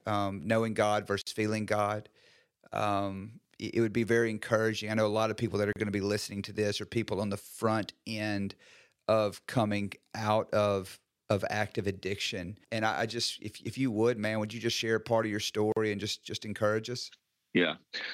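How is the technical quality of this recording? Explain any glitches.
The recording has three short dropouts, each a gap at a join of encoded pieces: at 1.22 s (about 52 ms), 5.73 s (33 ms) and 15.72 s (43 ms). Separately encoded segments were spliced without trimming the encoder's leading delay and final-frame padding, so brief silence sits inside continuous speech, which then resumes mid-flow. On a waveform, each shows as a flat notch with near-vertical, slightly smeared edges. On a spectrogram, each is a thin blank vertical stripe.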